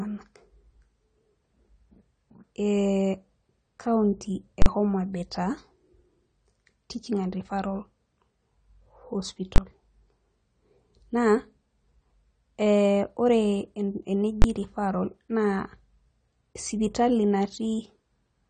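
The speech is plainly dull and smeared throughout, likely from AAC compression at a low bitrate near 32 kbps. A spectrogram shows nothing above 19 kHz. Invalid numbers at full scale strike at 4.62–4.66, 9.56–9.58 and 14.42–14.44 s, holding the waveform flat at one extreme, far past the speech peaks, and each is heard as a loud bang.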